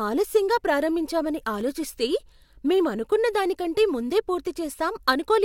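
At 1.61 s the speech drops out for about 1.8 ms in a block of digital silence. A short run of samples was replaced by silence, most likely because the output buffer was not filled in time. The waveform jumps straight to silence and straight back, with no fade on either side. Those two hard edges sit so close together that they merge. The result is heard as a single sharp tick rather than a gap.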